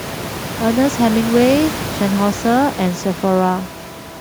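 This speech recording has no technical faults; the background fades to silence in the pauses and returns with the next sound, and the room noise sits about 14 dB below the speech.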